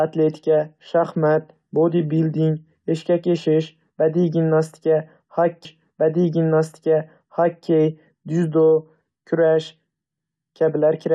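At 5.64 s, a stream segment repeated. The player queued the same two seconds twice. Speech replays until 7.65 s, with a small blip at the jump.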